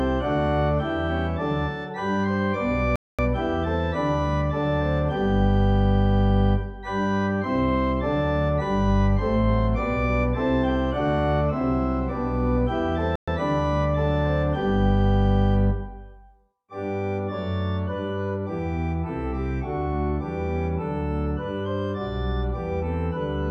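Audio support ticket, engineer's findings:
Playback stall at 2.96–3.19 s (230 ms) and 13.16–13.28 s (120 ms): output drops to silence mid-flow, then resumes. Likely player buffer underrun or blocked playback thread.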